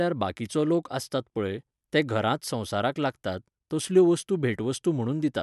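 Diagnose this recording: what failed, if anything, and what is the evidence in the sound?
Nothing failed; no fault is audible anywhere here.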